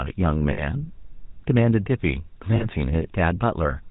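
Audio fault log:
throughout: GSM full-rate codec. The audio is band-limited to about 4 kHz and carries a buzzy, gravelly roughness, because the vocal-tract model is driven by coarse, regularly spaced pulses, a plainly audible texture consistent with the 13 kbps full-rate coder.
0.52–0.62 s and 2.56–2.66 s: lost GSM frames. For about 60 ms and then 40 ms, the sound is held as a rough, metallic ring. The last good frame's settings are repeated to cover the gap, which fits three and then two lost 20 ms frames.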